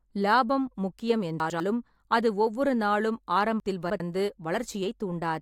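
Chunks out of order at 1.4 to 1.6 s and 3.6 to 4.0 s: 100 ms blocks of speech play after the ones meant to follow them, one slot late, then three, so nothing is missing but the sound jumbles briefly at the hard joins.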